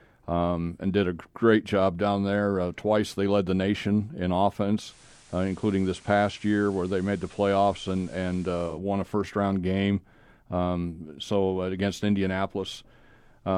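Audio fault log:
4.80–8.80 s, digital radio blending to analogue: after "led the nation in", the receiver lost its digital stream and cross-faded over about 144 ms to the station's FM broadcast, returning before "won a first round". While on FM, the speech drops by about 1 dB and carries a steady hiss roughly 30 dB below the signal, the noise floor of the analogue path.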